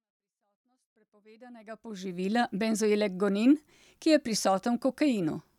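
Nothing stood out on listening to this speech, which rises gently from silence in a smooth fade-in that reaches full level at about 2.27 s.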